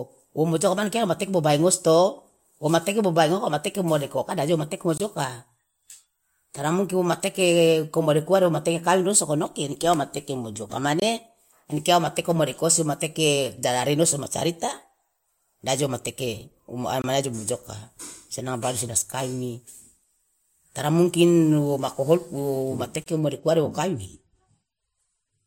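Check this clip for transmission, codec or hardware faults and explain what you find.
The speech has one fault, a gap between chunks, heard four times: at 4.98–5.00 s, 11.00–11.02 s, 17.02–17.04 s and 23.04–23.06 s. The audio was split into 6.0 s chunks, and about 21 ms of silence sits at each join, likely from codec padding or late playback start. None of the speech is lost, but it is interrupted at each join. Each gap is a short, hard-edged dropout at a regular 6 s interval.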